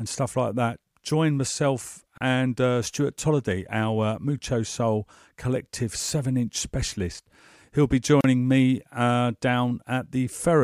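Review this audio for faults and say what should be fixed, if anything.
Gaps at joins of encoded pieces open at 2.18 s (about 32 ms, after "like that join myself") and 8.21 s (about 34 ms, before "me uh"), six seconds apart. Separately encoded pieces kept their start delay and end padding. Each gap shows as a thin blank vertical column with slightly smeared edges. To prevent this, trim each piece's encoder delay and padding before joining, or encode the stream in one pass.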